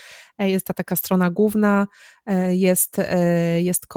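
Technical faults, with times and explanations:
No technical faults detected in this speech clip.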